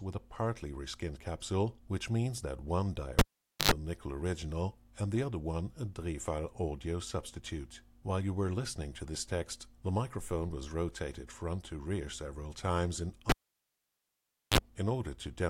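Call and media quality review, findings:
Cable pulled and plugged in, twice: live connector lost contact at 3.19 s (gap about 0.48 s, 90 ms of 50 Hz mains buzz, back at 3.71 s) and 13.29 s (gap about 1.24 s, 40 ms buzz, back at 14.58 s). Pop, near silence, hum while only the tip touches, second pop.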